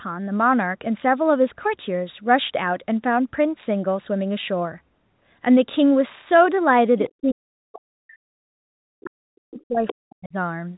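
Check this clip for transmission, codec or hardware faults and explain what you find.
Two echo-control faults affect the last few seconds of this speech clip. The G.711 telephone coding keeps everything below about 3.9 kHz and adds only faint noise.

Other side's voice leaking through, at 7.03 to 7.12 s and again at 9.87 to 9.95 s: brief scraps of a second voice surface. The first is faint, about 25 dB under the talker. The second is much closer in level. The likely cause is residual loudspeaker echo that the canceller failed to remove. Unlike ordinary crosstalk, these scraps arrive only in short bursts.

Speech suppressed in double talk, from 7.12 to 10.36 s: across roughly three seconds the talker's voice sinks, at its deepest around 40 dB down. This likely happened because the echo canceller clamped down on both voices while both sides spoke together. A packet-loss dropout would cut out abruptly. 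This sounds more like an attenuation that tracks the overlap.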